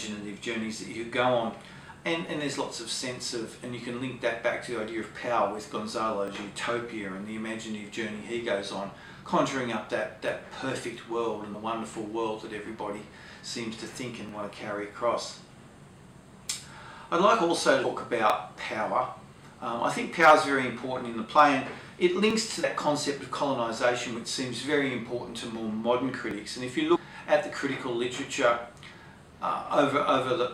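Starting at 2.27 s, a short stutter recurs every 4 s, at 2.27, 6.28, 10.28, 14.29, 18.30, 22.31 and 26.31 s. These are overlapping chunks. The audio was handled in 4 s blocks, and each block starts about 7 ms before the previous one finished, so those 7.07 ms play twice at every join. The doubled sliver gives a small click-like hiccup, and its strict 4 s spacing points to block-based processing.

At 11.53 s the sound jumps forward with a soft smeared blip rather than a sharp click. This is compressed frames skipped: roughly three frames of 26.1 ms each, about 70 ms of audio, were never decoded. The same happens at 17.83 s, where the gap is larger, around seven frames or roughly 200 ms. It happens again at 22.63 s (about three frames) and at 26.95 s (around seven frames, roughly 150 ms). The overlapping frame windows blur each join into a brief smudge.

From 20.23 to 20.32 s the loudest peaks are pushed about 5 dB past the available range. 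This is hard clipping: the waveform tops are sliced flat, which adds high harmonics and gives a harsh crackle on the loud part. A milder instance, about 2 dB over, follows from 21.39 to 21.43 s and is heard as a brief rasp on the peak.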